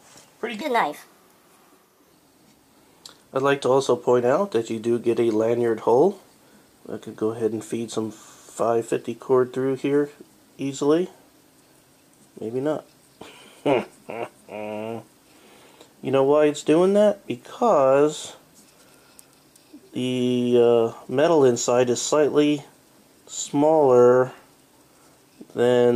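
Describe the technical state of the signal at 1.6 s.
A wrong sample rate fault runs from 0.61 to 2.12 s. The samples play faster than they were captured, with no conversion, consistent with 32 kHz material played at 44.1 kHz. Everything runs 1.38 times fast and sits about 5.5 semitones high.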